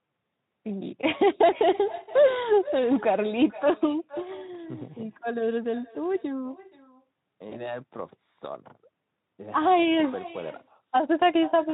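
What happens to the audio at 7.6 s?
Around 7.6 s the audio falls inside a stretch of VoIP packet loss concealed by the speech codec, lasting from 7.49 to 7.79 s. About 20 ms of audio went missing, which fits a single lost frame. The decoder filled the gap by extending its last pitch and spectral shape at falling gain, so the sound is briefly stretched and smeared, then stays weak for tens of milliseconds while it recovers. On a spectrogram the harmonics go unnaturally flat and steady before thinning out, and the waveform envelope dips and regrows gradually rather than snapping back.

Underneath runs an echo with no canceller, present throughout. A quieter copy of the sound, about 19 dB down, trails the original by roughly half a second. It happens because the far end's loudspeaker output leaks into its microphone and nothing subtracts it, so the round trip returns a thinner shadow. A spectrogram shows a faint, delayed duplicate of each energy pattern, and the waveform carries a low-level repeat after every burst.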